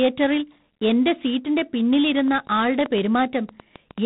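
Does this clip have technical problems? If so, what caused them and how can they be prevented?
Yes. G.726 ADPCM coding runs throughout: the speech carries a harsh, rasping hiss that tracks its level, and nothing passes above 3.8 kHz. That coarse difference coding fits 24 kbit/s. Prevent it by using 32 kbit/s or a wideband codec.

A train of clicks runs from 2.19 to 3.99 s: around ten similar pops at an uneven pace of about 6 per second, peaking roughly 10 dB above the speech. The likely cause is interference from nearby equipment or a faulty connection or power supply. Prevent it by shielding cables and isolating the interface.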